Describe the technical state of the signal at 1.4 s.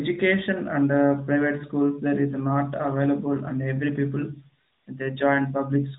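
At 1.4 s the speech is intact, with no fault present at that moment.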